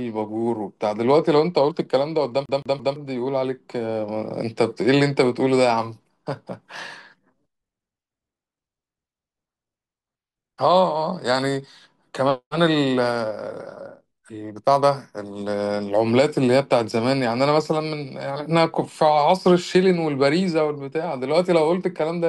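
At 2.46 s the speech jams in a CD stuck on one turn: a 168 ms slice plays three times through 2.96 s, the laser jumping back one track per revolution. It sounds like a fast, even stutter; the waveform shows identical repeated blocks separated by brief silent gaps.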